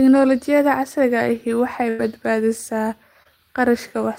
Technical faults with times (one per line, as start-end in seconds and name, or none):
1.89-2.01 burst of packet loss
3.23-3.27 short concealed packet loss